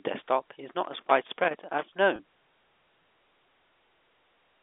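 Just after "desktop is", from 0.84 to 1.83 s, a loose connector crackle breaks into the speech. A worn or dirty contact in the signal path is making and breaking as it shifts, so the audio is chopped on and off at irregular intervals, and any DC present on the line turns each break into a small pop. For nearly a second this comes through as a ragged burst of scratching and crackle laid over the speech.

At 2.16 to 2.19 s a single packet carrying about 30 ms of audio goes missing, and the receiver covers the gap with packet loss with pitch repetition. It replays the last pitch period it received to fill the hole and fades that copy down until the following packet takes over. With a loss this short, the result is a brief held, slightly buzzy sustain of the preceding sound, not a silence. All of this sits within a telephone band of roughly 300 Hz to 3.6 kHz, carried over 64 kbps G.711 A-law.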